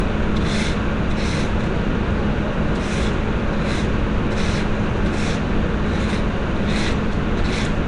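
From start to finish the sound carries a rough, hissy halo and a smeared, underwater blur, with nothing above about 10.6 kHz. The cause is likely Nellymoser compression, the old Flash codec. It spends a fixed, small bit budget on short blocks and swaps quiet bands for noise, which fits a rate near 44 kbps. A plain low-pass filter would only dull the top. Here the grainy noise fill and smearing give it away.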